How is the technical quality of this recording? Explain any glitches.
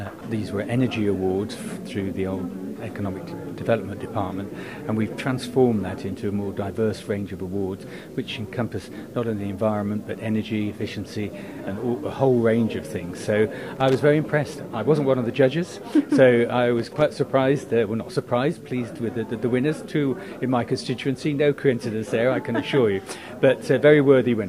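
Two short glitches mar the recording. Both are loose connector crackle, from 13.76 to 13.95 s and from 16.77 to 17.02 s. A worn or dirty contact shifts and keeps breaking the circuit. The signal is chopped up. Each burst sounds like irregular scratchy crackling.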